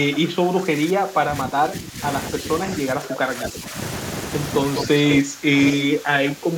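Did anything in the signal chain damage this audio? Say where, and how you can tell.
Yes. The call processing stage likely mishandled double talk: the echo canceller ducked the near talker while the far side spoke. The speech sinks by up to about 15 dB from 0.04 to 2.03 s, 2.33 to 2.47 s, 2.64 to 3.75 s, 4.87 to 4.96 s, and 5.21 s to the end.

The same echo canceller likely also let some echo leak through. Brief copies of the speech come back 201 ms late, at 3.41 to 3.47 s (about 10 dB down) and at 4.76 to 4.86 s and 5.12 to 5.16 s (about 5 dB down), as short scraps.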